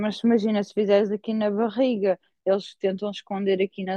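A short speech recording with no audible technical fault anywhere in the signal.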